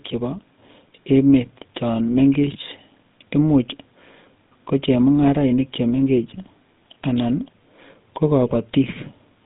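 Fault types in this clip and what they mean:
GSM full-rate codec, throughout: the speech is rebuilt from a vocal-tract model driven by regularly spaced pulses, which fits a 13 kbps full-rate stream. The band is held to about 150 Hz to 3.7 kHz, and a buzzy, gravelly roughness is plainly audible across the clip.
GSM bit errors, 8.46 to 8.58 s: flipped bits reach the decoder and corrupt filter, pitch and gain values. This sounds like about five damaged frames, consistent with an error rate near 2%. For roughly 0.12 s the spectrum and level are thrown off, and the speech breaks into a squawking, gargling burst.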